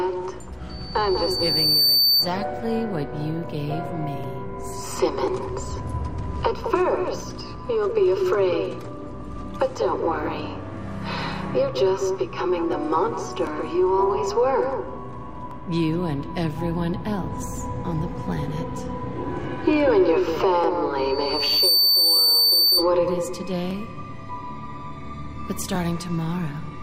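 At 0.69 s a loudspeaker feedback squeal begins: a single 4.6 kHz tone swells over about a second until it sits a few decibels above the sound, then stops at 2.34 s. It recurs from 20.97 s to 22.90 s at the same pitch, building a little faster. The microphone is re-amplifying its own loudspeaker output at that frequency. The rising onset and unchanging pitch distinguish it from a steady interference whistle, which appears at full level.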